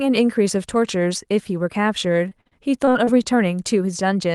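From 2.29 s to 3.09 s the speech breaks up with repeated packet loss, giving a robotic sound. Six short gaps fall in under a second, the longest about 43 ms, and each is patched by stretching the preceding sound, so roughly a fifth of the span is concealed rather than real. The result is choppy, robotic-sounding speech with small pieces missing, heard within the Opus call path's bandwidth, which tops out near 12 kHz.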